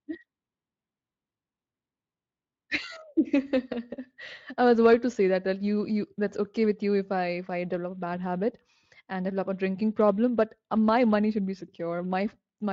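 Nothing stood out on listening to this speech.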